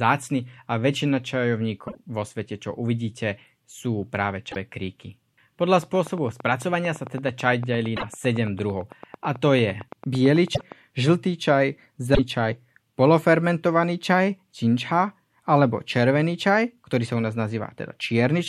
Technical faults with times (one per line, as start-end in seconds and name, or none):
1.87-1.95 broken MP3 bit reservoir
4.51-4.56 broken MP3 bit reservoir
5.83-10.73 train of clicks
7.96-8.04 broken MP3 bit reservoir
10.54-10.61 broken MP3 bit reservoir
12.14-12.19 broken MP3 bit reservoir